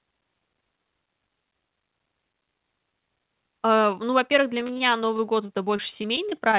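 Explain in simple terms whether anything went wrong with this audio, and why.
From about 4.6 s to 6.55 s the speech turns choppy and robotic, with tiny pieces dropping out in quick succession. This is repeated packet loss. Over that stretch about fourteen small chunks of the call audio went missing, each no longer than about 27 ms. Every hole was covered by stretching the sound just before it, so roughly an eighth of that stretch is filler, which gives it the mechanical edge. The call line's cutoff near 4 kHz also leaves the whole clip sounding narrow.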